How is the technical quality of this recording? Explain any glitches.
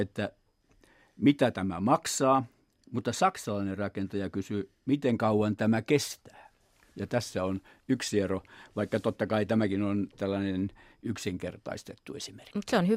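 No glitches or technical faults are audible anywhere in the speech recording.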